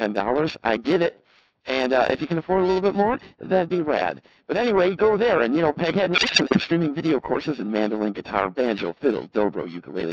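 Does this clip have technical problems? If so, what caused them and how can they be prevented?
Yes. The whole clip has passed through the Codec 2 vocoder. Only pitch, voicing, energy and a coarse spectral envelope survive, and the decoder rebuilds the speech from sine waves. The result sounds robotic and buzzy, and the heavy smearing fits the 3.2 kbit/s mode. On a spectrogram, harmonics appear as unnaturally regular, evenly spaced stripes with a blurred, blocky envelope and little fine noise detail. The waveform no longer resembles the original. To prevent this, record or transmit through a higher-rate waveform codec whenever the channel allows it.

Periodic clock jitter also runs throughout. A disturbance modulating the converter's clock at around 1 kHz puts sidebands above and below every component, spaced at that interval, so the speech gains a rough, metallic edge that disappears in pauses. 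A spectrogram shows ghost copies of each harmonic offset by roughly 1 kHz, strongest around the higher-frequency content. To prevent it, give the converter a clean, well-isolated clock and keep interference away from the clock lines.

Bit errors on digital voice radio hit from 6.12 to 6.64 s. Corrupted bits at an error rate of a few percent reached a decoder where every bit helps set a frame's pitch, level, voicing or spectrum. The voice there jumps in pitch and loudness and breaks into warbling, bleepy gibberish. A spectrogram shows harmonic stripes leaping abruptly between frames, and the waveform envelope lurches in level. To prevent this, operate with a stronger signal margin or use stronger forward error correction.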